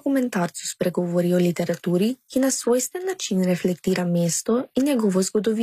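Throughout the clip, the speech has most likely passed through HE-AAC compression, which codes only the lower spectrum and synthesises the treble by copying lower bands upward under a coarse envelope. The damage is plainly audible: s sounds come out gritty and metallic, because the rebuilt upper harmonics don't line up with the real ones below the crossover. Nothing survives above 14.9 kHz, and the overall coarseness points to a low bitrate of around 24 kbps.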